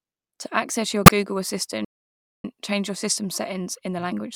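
A short, loud chirp or burst of noise at 1.06 to 1.11 s, right after "access your", is a corrupt frame decoded: damaged compressed frames, a few in a row, put energy at the wrong frequencies. At 1.85 s the speech stops dead for about 0.59 s before resuming with "change your system settings", a playback stall, likely caused by the player running out of data.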